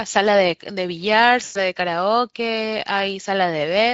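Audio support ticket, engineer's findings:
VoIP packet loss concealed by the speech codec, 1.43 to 1.59 s. Speech gap of about 120 ms, which fits six lost 20 ms frames. Decoder extrapolating last pitch and filter, gain stepping down each frame: stretched, fading tone or noise. Weak, smeared onset as decoder state recovers after packets resume. Speex codec path near clean at this rate, damage faint at most, so the artefact sits in transport, not encoding.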